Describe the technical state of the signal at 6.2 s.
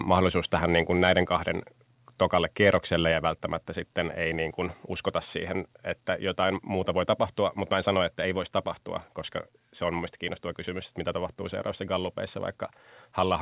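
At 6.2 s the speech is intact, with no dropout, glitch or other fault; the band stops near 4 kHz, as expected from a narrowband call codec.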